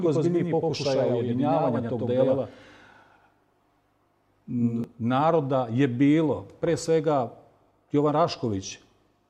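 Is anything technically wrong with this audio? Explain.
Yes. From the very start until 4.84 s, the clip has a doubled audio track. Every sound is heard twice. A second full-band copy trails the first by about a tenth of a second, at roughly the same level. The result is a flat, slapback stutter with no room decay. It is likely a second capture through a slower path, or an edit holding two copies out of step. At 4.84 s the copy drops out abruptly.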